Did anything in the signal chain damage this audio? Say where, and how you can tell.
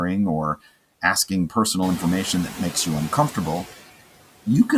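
Yes. Noise suppressor artifacts run through the whole clip, introduced at the call-processing stage. The steady background drops by about 17 dB in the gaps between words and swells back up beneath them, because the suppressor judges each frequency band frame by frame and pulls down whatever it takes for stationary noise. The pumping is easiest to follow after the room noise climbs by about 13 dB around 2 s, where it still sits about 16 dB below the speech.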